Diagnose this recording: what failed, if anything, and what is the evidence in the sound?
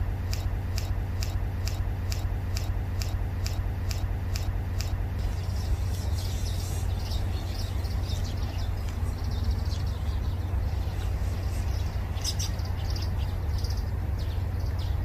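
The first stretch is a broken-record loop. From the very start to 5.19 s, the same 0.45 s fragment repeats back to back, eleven times. That's likely a stalled playback or stream buffer re-sending the last chunk it held, so the audio meant for those seconds is gone.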